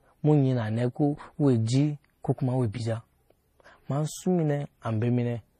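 From start to finish the speech carries two layers of compression damage at once, likely from transcoding between lossy codecs: a low-rate HE-AAC encode, around 24 kbit/s, re-encoded as MP3 at roughly 40 kbit/s. Swirly, watery high-band texture sits alongside MP3 pre-echo smear and warbling on consonants. A spectrogram shows nothing above 14.7 kHz, plus blocky, patchy high-frequency energy where the second encoder spent bits on the first one's artefacts.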